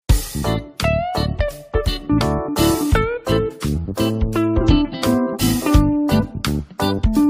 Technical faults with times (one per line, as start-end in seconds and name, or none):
none